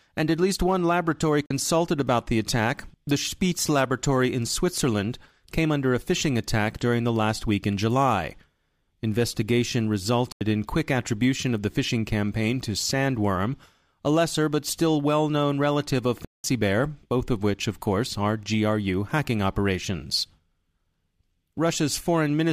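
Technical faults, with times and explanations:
1.46–1.51 s, 10.32–10.41 s and 16.25–16.44 s, Bluetooth dropout: the speech cuts to silence for about 43 ms, 85 ms and 192 ms, likely because packets of about two, four and nine at a time never reached the headphones. Unlike an underrun that pauses and delays playback, the speech resumes further along, as if it had played on. Unlike codec concealment, the gaps are plain silence, not smeared or repeated sound.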